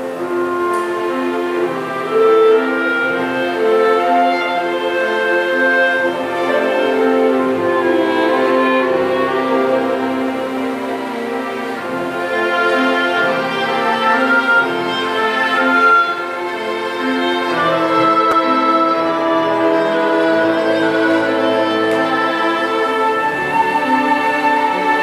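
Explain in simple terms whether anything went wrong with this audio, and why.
At 18.32 s there's a brief chunks out of order glitch: a tiny 6 ms piece played one slot late, so you hear a quick jumbled moment.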